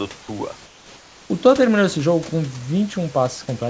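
From 0.66 to 1.30 s, a pause of about 640 ms, the room background is replaced by comfort noise. The real noise, with its fine texture, gives way to a steady, featureless hiss about 3 dB quieter, then the original background returns when sound resumes. The likely cause is discontinuous transmission: the sender's voice detector stopped sending audio during the gap, and the receiver synthesised roughly matching noise to fill it.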